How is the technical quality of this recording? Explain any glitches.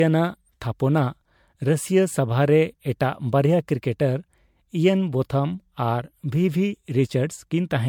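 The technical quality is compromised throughout by one persistent fault, generation loss, present from start to finish of the speech. It sounds swirly, hollow and smeared, and consonant attacks blur into the sounds around them. The likely cause is repeated lossy coding: an MP3 at around 96 kbit/s decoded and re-encoded about five times, each pass quantising on a shifted frame grid so noise and spectral holes pile up. The band still reaches about 19.9 kHz, yet the damage exceeds what a single encode at that rate would leave.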